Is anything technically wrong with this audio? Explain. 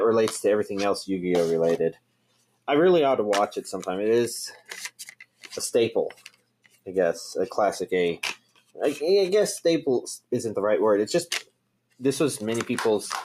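Yes. A noise suppressor meant for speech has been applied to music or sounds throughout. It treats sustained material as noise, so the level swings by about 15 dB and the audio pumps and thins.

The sound was cut by the noise suppressor at 1.92–2.68 s, 4.54–4.71 s, 4.9–5.5 s, 6.11–6.87 s, 8.36–8.77 s and 11.43–12.01 s. Each time, held sound sinks, by up to about 21 dB, and by about 15 dB at 4.54–4.71 s.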